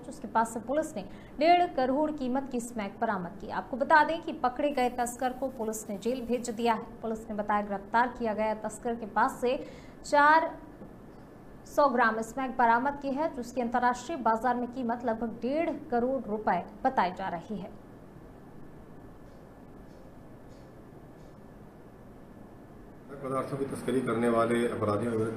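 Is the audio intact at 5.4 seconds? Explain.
No. From 4.71 to 6.71 s the sound turns thin, bright and hissy at the sibilants, with treble about 10 dB hotter at 10 kHz than at 1 kHz. This is pre-emphasis left on: an FM-style 50 µs treble boost whose matching de-emphasis cut was never applied.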